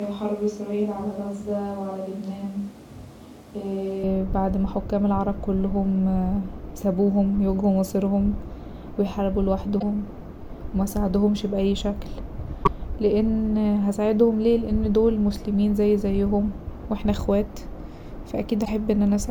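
A switch to a distant microphone is already under way when the clip begins and lasts until 4.03 s. The speech sounds roomy and hollow, thin in the bass, roughly 5 dB quieter than what follows, with room noise sitting about 30 dB below the speech. The likely cause is that the close microphone's signal was lost and a farther pickup, such as a camera microphone, carried the recording until the close signal returned abruptly at 4.03 s.

A broken MP3 bit reservoir shows up three times: at 9.78 to 9.83 s, at 12.63 to 12.69 s, and at 18.64 to 18.68 s. Each time the sound skips forward and a brief glitch, a few tens of milliseconds long, replaces the audio. The likely cause is missing frames. The frame after each gap reaches back for bits it had stored in earlier frames and decodes bytes from the wrong frame. The glitches span about two frames of roughly 26 ms, which fits standard MP3 framing.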